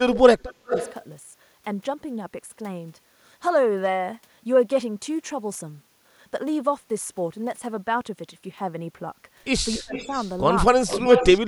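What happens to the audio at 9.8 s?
From 9.76 to 9.97 s the speech drops sharply, by roughly 25 dB at its deepest, for about a fifth of a second. That is speech suppressed in double talk: with both sides likely talking at once, the echo canceller mistook the talker for loudspeaker echo and turned the signal down. On a waveform the envelope pinches abruptly over that span, and a spectrogram shows the energy thinning.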